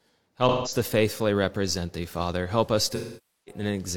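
AAC frame loss with concealment hits from 0.48 to 0.76 s, just before "to faithfully represent thee": about 0.17 s, four lost frames, is rebuilt from the last good spectrum, sounding smeared and noisy, with blurred harmonics on a spectrogram. From 2.95 to 3.62 s, roughly twelve frames are lost, and the patch decays toward silence and fades back in, visible as a sagging waveform envelope.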